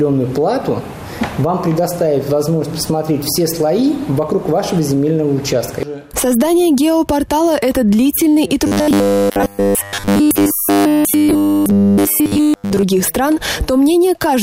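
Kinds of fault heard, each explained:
Robotic sound from repeated short buffers: new audio likely arrived too seldom, so the last short block was replayed while real audio was skipped. From 8.67 to 12.83 s everything turns into a rigid, metallic 100 Hz buzz, which fits a repeated 10 ms block.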